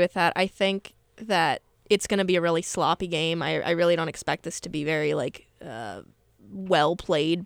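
No technical faults can be heard anywhere in the speech.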